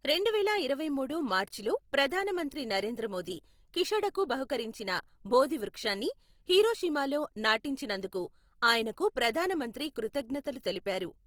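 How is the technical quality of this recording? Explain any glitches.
Technical quality is limited by one fault running through the whole recording: Opus compression. From start to finish the speech carries a rough, grainy texture, with voiced sounds turning plainly noisy. This is likely low-rate Opus in its music (CELT) mode, consistent with a stream around 24 kbps. The encoder keeps each band's energy but fills starved bands with folded or noise-like content. A spectrogram stays full-band up to about 20.2 kHz with few holes, but harmonics look smeared and speckled.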